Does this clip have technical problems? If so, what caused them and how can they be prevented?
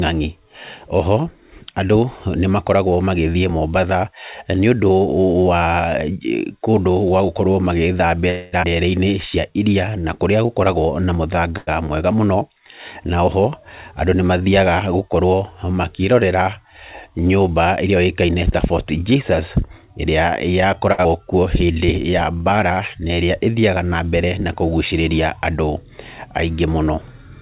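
Yes. There are five kinds of network timing fault, all typical of a call path whose band stops at 4 kHz, as with a narrowband codec such as G.711.

Call audio freeze, 8.30 to 8.54 s: the last sound is carried on as a fading buzz for about 223 ms, and the speech then resumes exactly where it stopped, with nothing lost. The likely cause is packets held up in transit until the jitter buffer ran dry. Compared with a short stall, it is longer and fades rather than simply holding. A larger jitter buffer and a steadier, less congested network path would prevent it.

Skip ahead, 8.62 to 8.65 s and 21.04 to 21.07 s: each time the speech jumps forward by about 150 ms, with almost no gap at the join. Late audio was discarded, either in transit or by an overflowing jitter buffer, while newer audio was already waiting. Unlike a freeze, something is actually missing rather than delayed. Reducing packet loss and avoiding bursts that overfill the buffer would prevent it.

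Jitter buffer slow-down, 9.04 to 10.48 s at 92% speed and 21.53 to 23.52 s at 93%: the receiver repeated single pitch periods to rebuild its reserve, adding 121 ms and 149 ms. Speech drags with stretched sounds but keeps its pitch. That unchanged pitch is what separates it from a playback-rate error, which would lower the pitch too. More stable packet timing would prevent it, because the buffer would not run low.

Short stall from a late packet, 11.57 to 11.69 s and 20.92 to 21.00 s: one sound is held too long, for 97 ms and then 60 ms, with a faint buzzy dip, and speech continues with nothing missing. A single packet arrived after its playout time. It is briefer than the freeze and does not fade away. A slightly deeper jitter buffer target would prevent it.

Jitter buffer speed-up, 14.86 to 15.74 s at 107% and 20.48 to 20.88 s at 122%: short pitch-period pieces were cut repeatedly to shed excess delay, about 70 ms and about 100 ms in total. 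Speech sounds hurried at unchanged pitch. Unlike a skip ahead, the loss is spread thinly with no single jump. Smoother packet delivery, without late packets arriving in bunches, would prevent it.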